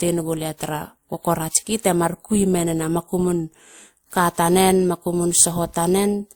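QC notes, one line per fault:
throughout, transcoding between lossy codecs: the speech was likely encoded twice, pointing to WMA then lower-rate Opus, so both codecs' artefacts are heard together, with nothing above 20.1 kHz.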